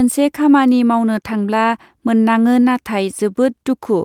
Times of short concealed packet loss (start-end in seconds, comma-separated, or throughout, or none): none